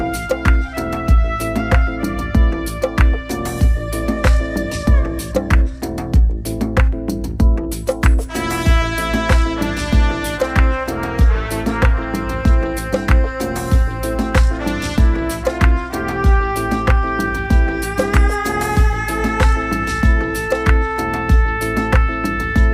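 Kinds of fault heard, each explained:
Nothing stood out on listening to this clip.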